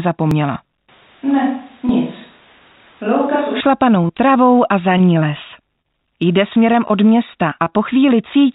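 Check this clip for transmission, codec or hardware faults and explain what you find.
Three kinds of fault are audible, carried over a call path whose band stops at 4 kHz, which fits a G.711 A-law codec.

Dropped buffer (overrun), at 0.31 s and 1.89 s: the software likely failed to read its buffer in time, so roughly 40 ms and then about 10 ms of audio vanish. Each is heard as the sound jumping ahead.

Switch to a distant microphone, 0.89 to 3.61 s: the close microphone likely dropped out in favour of one farther away. The sound turns abruptly hollow and roomy, about 5 dB quieter, with background noise roughly 30 dB below the speech, then snaps back.

Scattered short gaps, 3.95 to 7.74 s: around fifteen lost or late packets, 160 ms in all and none much over 30 ms, were patched by extending the preceding sound. The audio stays clear but is peppered with brief ticks and smears.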